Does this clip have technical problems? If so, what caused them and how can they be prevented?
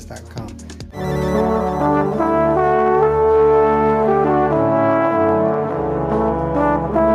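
No, there are no technical problems to be heard in this clip. With nothing wrong, there is no cause to trace and nothing that needs preventing.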